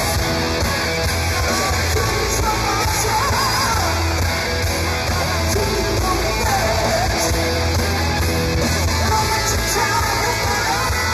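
Channel delay (comb filtering) runs throughout: one channel lags by a fraction of a millisecond, so the mono sum cancels near 3 kHz and sounds hollow.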